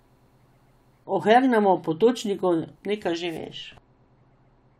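De-emphasis applied wrongly affects the speech from 3.37 s to the end. A treble cut meant to undo pre-emphasis acts on audio that never had the boost, or was applied twice, so the response slopes smoothly down, about 13 dB lower at 10 kHz than at 1 kHz, leaving the speech dull and muffled.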